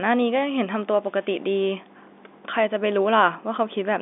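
No technical faults can be heard in this speech, which carries the narrow band of ordinary G.711 telephone coding, with the line running from about 250 Hz to 3.6 kHz and nothing above about 3.7 kHz.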